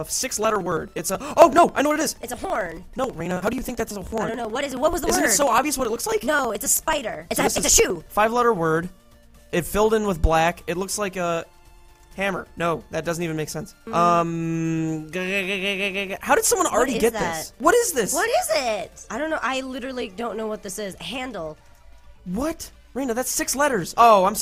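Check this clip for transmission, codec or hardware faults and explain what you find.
One hardware fault. Periodic USB or driver dropouts from 0.07 to 8.17 s: something stalls the bus every 54 ms, skipping around 10 ms of audio each time, heard as a steady rapid ticking.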